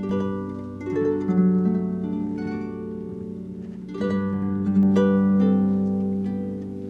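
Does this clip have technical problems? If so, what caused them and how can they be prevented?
Yes. A channel delay (doubling) runs from 0.00 to 4.83 s. Every sound is followed by a second copy about 92.9 ms later. At that gap the copy is heard as a separate slap echo at the same level, not as a blend. One channel of a stereo pair arrived late by a long buffer, which fits a 4096-sample buffer. The two channels were then summed to mono. To prevent it, keep both channels aligned through the same buffering path, and check sync before any mono fold-down.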